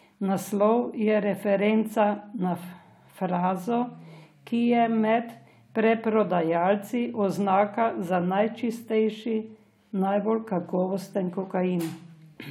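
Nothing stood out on listening to the speech in this recording.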